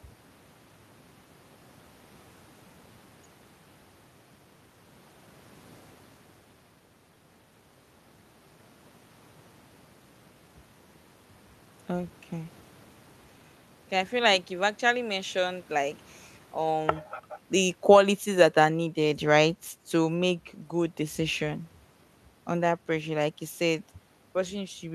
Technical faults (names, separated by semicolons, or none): automatic gain falling